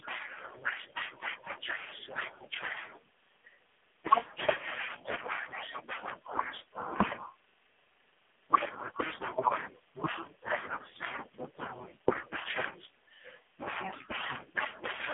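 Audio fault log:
Throughout: AMR narrowband mobile codec. The speech sits in a narrow phone band, about 150 Hz to 3.5 kHz, with nothing above 3.6 kHz. The codec rebuilds the voice from a vocal tract model fed by sparse pulses in 20 ms frames. Here the damage is heavy. The voice sounds buzzy, thin and synthetic. The heavy damage fits one of the lowest AMR-NB modes, near 5.9 kbps.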